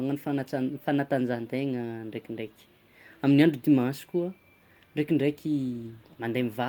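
No technical faults are audible anywhere in the speech recording.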